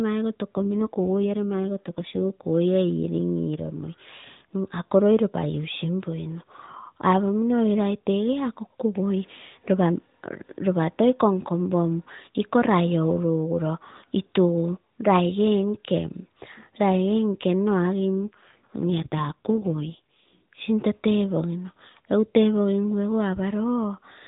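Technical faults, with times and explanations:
0.55–2.42 s and 18.25–20.39 s, AMR rate drop: the speech turns buzzier and more synthetic, which fits the mobile codec stepping down from 12.2 to 5.9 kbps. Unlike packet loss there is no gap, and unlike a bandwidth switch the 4 kHz narrowband ceiling stays the same.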